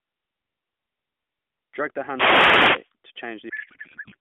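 From 2.06 to 2.91 s, a wireless microphone noise hit occurs: the analogue FM radio link fades as reflected signals cancel, so receiver noise climbs. It sounds like a burst of static and swish for nearly a second.

From 3.50 to 4.16 s comes a codec payload misread. The decoder unpacks the AMR bits with the fields in the wrong places, which fits octet-aligned AMR being read as bandwidth-efficient. The speech turns into garbled noise and warble that barely follows it, over the narrow 200 Hz to 3.5 kHz band of the AMR narrowband mobile codec.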